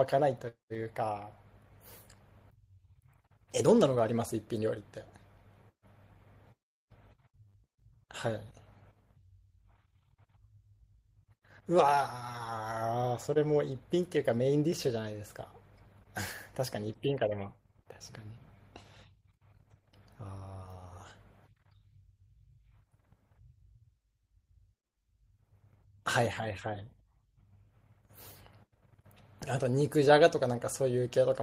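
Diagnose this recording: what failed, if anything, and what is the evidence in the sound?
Nothing failed in this recording.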